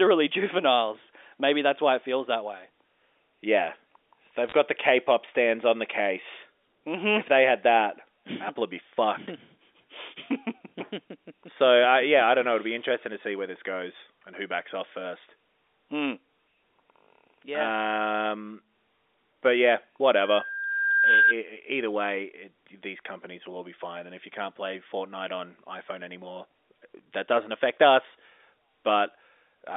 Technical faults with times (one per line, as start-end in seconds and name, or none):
4.48-4.54 bit errors on a digital phone line
20.23-21.35 loudspeaker feedback squeal